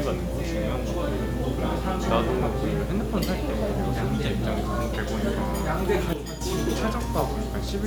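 At 6.13 s everything drops abruptly by about 7 dB, background included, and recovers at 6.41 s: a sudden gain jump, likely gain switched without a ramp.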